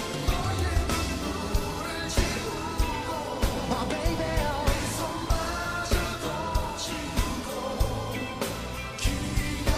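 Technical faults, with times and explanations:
0.26–9.27 s, periodic USB or driver dropouts: a regular tick repeats every 0.5 s, around twenty in all, each where roughly a millisecond of audio drops out and is replaced by silence as something stalls the USB bus or audio driver on a fixed schedule. The abrupt cut to silence and back sounds like a click. On a waveform these are brief flat gaps at even spacing; a spectrogram shows thin vertical broadband lines at the same interval.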